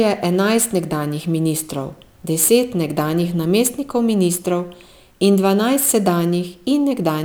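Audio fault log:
throughout, sample clock jitter: the converter's timing wanders by a few microseconds, so each sample lands slightly off, and the error grows with the waveform's slope. A hiss about 25 dB below the speech rides on louder, brighter syllables and drops away in pauses. A spectrogram shows broadband noise tracking the speech energy, densest at high frequencies.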